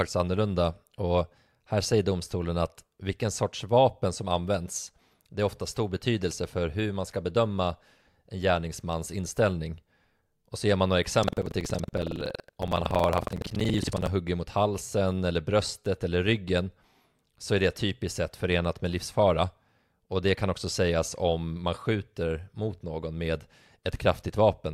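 From 11.19 to 14.09 s the speech picks up a robotic rattle at about 21.5 Hz. That's buffer tearing. The code filling the ring buffer and the hardware draining it have drifted until they cross mid-period. In each cycle, roughly a fifth of the buffer plays audio from around a tenth of a second earlier, with hard seams at both ends. The buzz rate fits a 2048-sample buffer, and it only rides on the speech itself.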